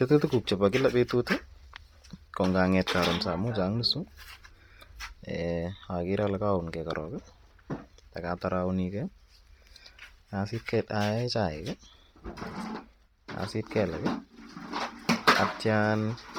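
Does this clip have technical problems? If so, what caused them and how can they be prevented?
Yes. The speech was likely carried over a starved Bluetooth LC3 compression link. Upper detail was discarded and noise-filled, giving a heavy breathy, grainy edge throughout, which fits roughly 32 kbps. To prevent this, use a higher LC3 bitrate or a wired connection.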